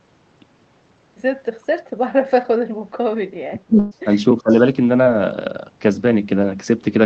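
Speech suppressed in double talk hits this speech recording from 3.38 to 4.09 s and again from 4.40 to 4.52 s. The level sinks by up to some 35 dB and then about 20 dB, most likely because an echo canceller mistook overlapping far-end talk for echo. A burst of packet loss at 3.79 to 3.93 s holds the last sound for about 116 ms, fading it out, then resumes with roughly 120 ms of speech missing. A short concealed packet loss at 5.03 to 5.07 s leaves a brief smear where about 23 ms was synthesised from the preceding sound, all heard through a codec band limited near 8 kHz.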